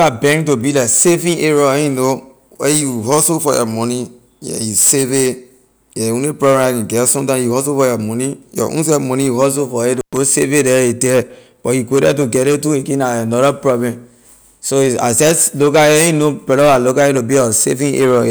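At 9.97 s the speech suddenly drops out, with a brief crackle at each edge, and returns at 10.17 s after a gap of about 116 ms. This is an intermittent contact: a loose cable or plug momentarily broke the signal path, then reconnected.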